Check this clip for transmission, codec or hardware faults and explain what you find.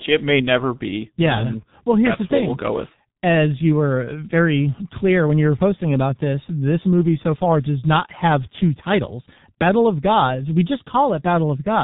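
The clip shows one codec fault, present throughout. G.723.1 codec: 30 ms frames and a slowly updated voice model at roughly 6.3 kbit/s, with everything above 3.8 kHz stripped, leave speech heavily muffled and hoarse with smeared consonants.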